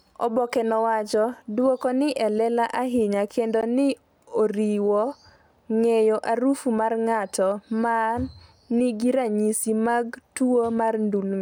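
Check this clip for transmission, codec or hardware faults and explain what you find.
One fault stands out in the speech. At 3.61 s the audio drops out for 16 ms: a block of digital silence, where a run of samples was zeroed, likely because the output buffer wasn't filled in time, so the sound cuts out and back with no fade.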